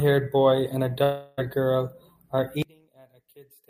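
At 1.03 s, right after "boy and a", the speech breaks into a fading buzz that fills about 0.34 s until 1.39 s, then resumes at "girl are" with that stretch lost. This is likely a long network dropout. Concealment fills the whole gap with no silence, so it is not a mute or simple cut.

From 2.62 s to the end, following "girl are", the level collapses by about 31 dB, leaving a faint copy. This points to one channel inverted, likely cancelling the centred sound when summed to mono, which sets it apart from a gain drop or fade.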